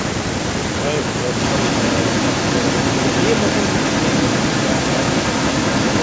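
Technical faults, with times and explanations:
1.33 to 6.03 s, echo leak: a second copy of the speech trails it by 266 ms, about as loud as the original, to the end. The likely cause is a far-end loudspeaker whose echo canceller let its microphone pickup back into the call.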